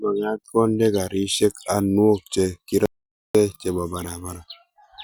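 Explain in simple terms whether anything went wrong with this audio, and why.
At 2.86 seconds the speech suddenly stops. Total silence follows, with no background sound at all, until 3.35 seconds. This is an audio dropout to silence. Almost half a second is lost. The likely cause is a brief break in the input.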